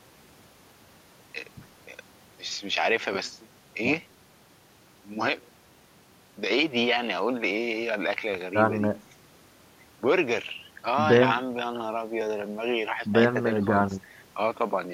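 No technical faults can be heard anywhere in the speech, so there is nothing to describe in time order.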